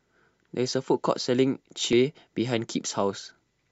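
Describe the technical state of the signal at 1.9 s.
At 1.93 s the speech is hit by damaged data in a compressed stream, a single brief event. Corrupted bytes at that point break the frame the decoder is reading, so it misinterprets or discards it, loses sync and scans forward for the next valid frame header. The result is a short chirp or blip that cuts across the speech for an instant before normal decoding resumes.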